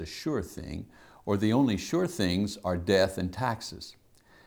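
An unstable converter clock is taking each sample slightly early or late at random, a fault known as sample clock jitter, with timing errors of a few microseconds. In this speech clip it begins at 1.23 s, just after "sure thing", and lasts to the end. Because the error scales with how fast the waveform is changing, a hiss-like roughness roughly 35 dB below the signal rides on louder and brighter sounds and drops away in pauses.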